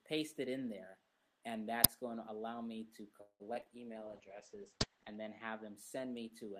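From 3.21 to 3.68 s, repeated packet loss (robotic sound) breaks the audio into a choppy stutter. Four gaps arrive in quick succession, the longest 185 ms. Each hole is bridged by stretching the preceding sound, and about half of this span is that synthetic fill. On a waveform, the envelope shows abrupt notches and flattened, repetitive stretches. On a spectrogram, smeared harmonic bands freeze and repeat, broken by short dark dropouts.

A call bitrate drop follows from 4.06 to 5.82 s. The encoder's budget collapses, with the roughness fitting a fall from around 32 to 10 kbps, and it stays at its lowest for roughly a second. The sound turns watery and muffled as the top end is cut at 8 kHz, below the Opus call path's usual 12 kHz ceiling. A spectrogram shows the upper band going abruptly dark above 8 kHz, with coarse, blotchy detail below it, until the full band returns.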